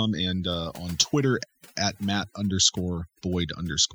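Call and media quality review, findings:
Overdone noise removal, throughout. Background gated to near silence with twinkling specks; low-level parts of speech eaten. Suppressor set too aggressive, zeroing bands near noise estimate. Spectrogram: isolated bright dots in empty gaps, ragged holes within speech harmonics.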